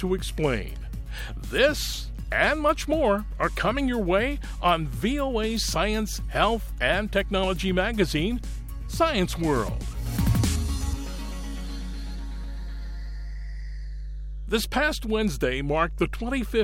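From the first second to the last, a steady low tone runs under the sound. It is mains hum at 50 Hz. The power line is leaking into the signal path, most plausibly through a ground loop or a nearby transformer. The hum is loud, sitting only about 10 dB below the wanted sound. It never changes pitch or level.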